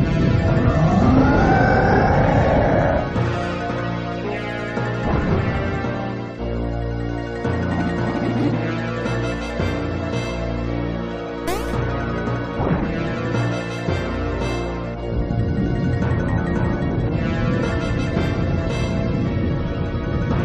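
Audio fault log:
No audible faults were found in this recording.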